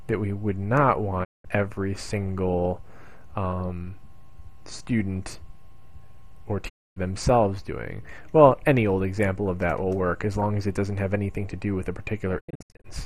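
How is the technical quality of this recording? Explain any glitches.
Three digital broadcast dropouts break the sound, at 1.23 s, 6.68 s and 12.39 s. Bad frames made the receiver mute, with 20 ms fades. That gives blank full-band gaps on a spectrogram and flat lines on the waveform, about 0.19 s and 0.26 s long. The last one is several holes, each up to 72 ms, spread over 0.43 s.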